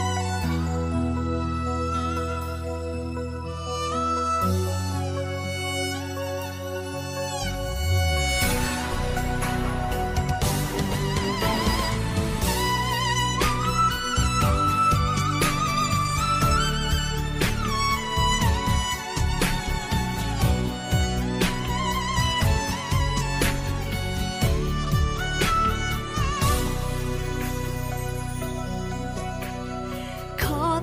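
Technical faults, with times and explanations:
No technical faults are audible anywhere in the clip.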